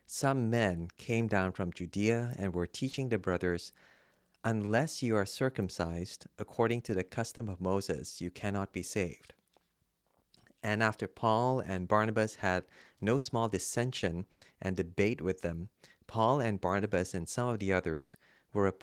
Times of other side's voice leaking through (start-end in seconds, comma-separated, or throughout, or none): none